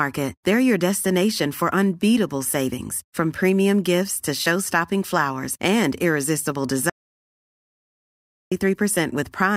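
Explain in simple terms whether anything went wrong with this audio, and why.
Right after "flowers and irresistible", the speech cuts off at 6.90 s and returns at 8.52 s: an audio dropout to silence lasting about 1.6 seconds. Unlike a natural pause, no room hiss remains, just dead silence, likely because the input briefly disconnected.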